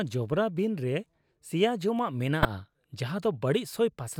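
At 2.42 s the speech is hit by a corrupt frame decoded, lasting about 32 ms to 2.45 s, which fits roughly two damaged frames. Flipped bits made the decoder apply wrong gains and codes, scattering energy into the wrong frequencies, so a short glitch peaking near -10 dBFS replaces the sound. Unlike a click it has a frame-length texture rather than a single sharp tick.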